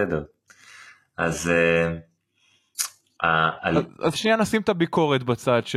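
Adaptive stream starting at a low bitrate, from 0 to 4.27 s: the treble sounds synthetic and smeared, which fits HE-AAC at 16 kbit/s, then sharpens abruptly without a gap.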